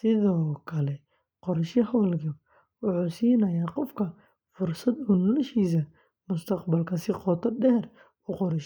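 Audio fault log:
No technical faults can be heard anywhere in this speech recording; the signal stays continuous throughout.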